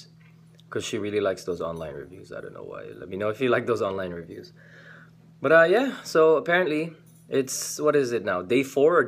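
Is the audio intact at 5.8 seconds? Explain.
No. At 5.77 s a bit error spike hits a single sample: one flipped bit throws its value off by a power of two, peaking around -21 dBFS, and it snaps straight back. It sounds like one sharp tick, showing as a lone needle on the waveform and a thin full-height vertical line on the spectrogram.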